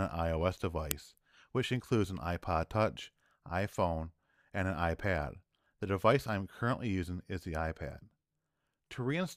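At 0.91 s a very brief, loud crack cuts through the audio, lasting about 1.45 ms. This is an uninitialised buffer: a block, which fits a 64-sample buffer, was played before any audio was written into it, so leftover memory came out as samples.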